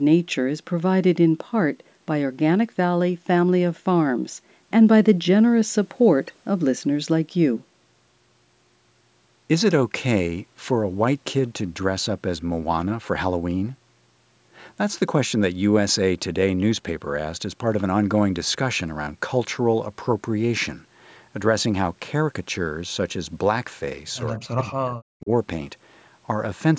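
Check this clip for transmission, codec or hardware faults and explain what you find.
Two faults appear near the end of the speech, both tied to how the far end handled its loudspeaker and microphone.

From 24.26 to 24.32 s there is an echo leak. The far side's echo canceller likely failed to remove all of the loudspeaker sound its microphone caught, so a residue was sent back. It arrives about 197 ms behind the original as a very faint, brief scrap, far below the main speech, heard as a ghost of what was just said.

From 24.36 to 25.3 s the speech is suppressed in double talk. With both sides talking at once, the echo canceller likely could not tell its own talker from the returning echo and turned everything down. The speech sinks very deeply, close to silence at its lowest, and stays dipped for roughly a second before recovering. The call microphone processing itself works normally, with nothing above 8 kHz.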